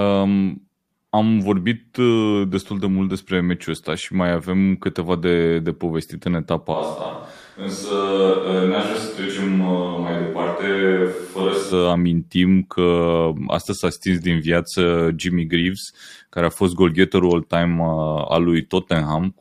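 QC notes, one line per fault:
6.76 to 11.71 s, switch to a distant microphone. The voice suddenly turns roomy and hollow, with thinner bass. It drops roughly 5 dB, and room noise rises to about 35 dB below the speech. The likely cause is that the close microphone's signal dropped out and a far-off pickup was used instead. That pickup hears more of the room's reflections and less of the voice's low end. The return at 11.71 s is just as abrupt.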